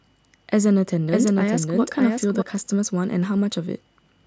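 From 1.08 s to 2.42 s the speech carries a doubled audio track: a full-band copy trails by roughly 0.7 s, about 5 dB lower, with no decay or room colour, cutting in and out abruptly. A second, slower capture path is the likely cause.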